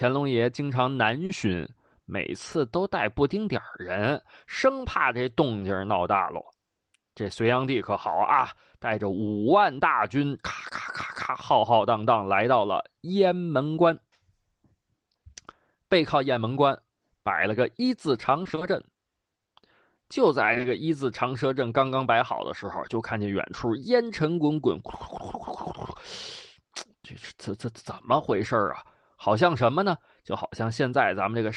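At 1.25 to 1.31 s, 5.59 s and 16.33 s there is short concealed packet loss: 40 ms, then 20 ms twice, of audio arrived too late and was patched by extending the preceding sound, heard as a brief smear or wobble. From 18.43 to 18.63 s repeated packet loss gives a robotic, choppy stretch. Five gaps of up to 20 ms each leave half that span synthesized, so the sound turns fragmented. Three back-to-back 20 ms concealments follow from 20.53 to 20.65 s and produce a slightly longer smeared wobble.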